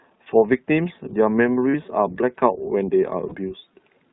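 From start to end the speech carries the iLBC codec's narrowband sound, with plainly audible coding damage. Each 20 ms frame's excitation is coded on its own, and at the rate heard here, which fits the 15.2 kbps mode, the voice is clear but slightly rough and synthetic. Nothing passes above 4 kHz, so a spectrogram shows a hard ceiling there with empty space above.

Lost iLBC frames interrupt the speech at 1.70 to 1.75 s and again at 3.28 to 3.35 s. Each gap is about 40 ms, which fits two lost 20 ms frames. The decoder fills the gap by repeating the last pitch cycle mixed with noise, heard as a brief held, buzzy vowel. On a waveform this shows as a short run of near-identical periods. A spectrogram shows flat, frozen harmonics with a noisy haze. Normal speech returns immediately afterward.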